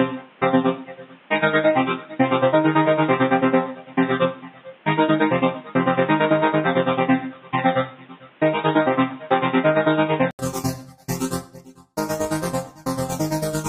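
From 0.0 to 10.39 s the sound is dull and boxy. Nothing passes above 3.8 kHz, and a low noise floor is added. At 10.39 s an 80 ms gap precedes fuller sound at a different level. The likely cause is an input switched to a poorer device.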